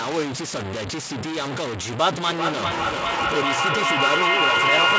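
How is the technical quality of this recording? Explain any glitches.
Poor, with heavy grain throughout and a runaway echo in the second half. The band stops at 8 kHz, as expected from the call path and its G.722-style wideband coding.

Across the whole clip the speech sounds harsh and gritty, with the distortion rising and falling with the sound itself and the quietest moments sputtering or dropping out. The likely cause is low bit depth without dither: truncation to about 4 bits leaves an error almost as loud as the speech.

From 2.24 s to the end, the sound comes round again at a steady interval of roughly 0.4 s, each pass thinner and more ringing. This is feedback echo between two devices: one device replays what the other's microphone sent, and that microphone picks it up again. The loop peaks at about 7 dB above the speech, so the repeats build up instead of dying away.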